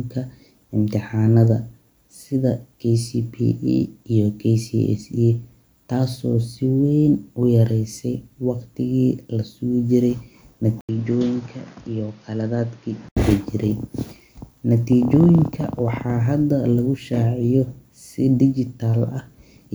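Speech clip, and at 10.81 s there's a brief 80 ms gap before the sound turns dull and a bit quieter, with nothing above about 6.9 kHz and a faint new noise floor, until 13.17 s. That's most likely the input switched to a poorer device mid-recording.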